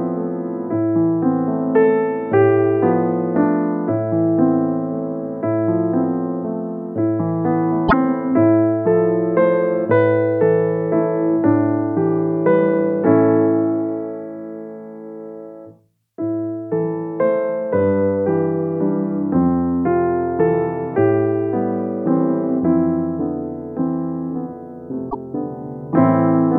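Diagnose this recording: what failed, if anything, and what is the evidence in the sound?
Damaged data in a compressed stream, at the codec stage. Brief glitches at 7.85 to 7.94 s and 25.07 to 25.15 s. Corrupted frames broke decoder sync.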